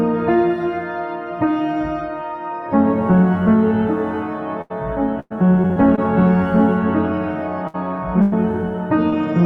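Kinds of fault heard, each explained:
Burst of packet loss: The music briefly freezes into a held, fading tone, then picks up a little further along with a slice missing, at 4.61 to 4.72 s, 7.67 to 7.76 s and 8.22 to 8.34 s. Between 60 and 100 ms of audio never arrived in time at each point, so the receiver stretched the last sound it had and let it decay across the hole before resuming with real audio.
Repeated packet loss (robotic sound): From 5.20 to 5.99 s the music turns choppy, stuttering as if stitched from pieces. Five separate holes fall in this stretch, the longest 106 ms, and about a quarter of the span is filler rather than real audio. Each gap is patched by extending the preceding sound, and the next one arrives before the music can settle, producing the choppy sound.
Short concealed packet loss: Around 9.10 to 9.14 s there is a quick smear, a momentary blur where the music loses definition for an instant. 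Roughly 20 ms of audio was lost in transit, and the decoder bridged the hole by continuing the sound just before it, then blended back into the real signal, leaving a brief wobble rather than an audible gap.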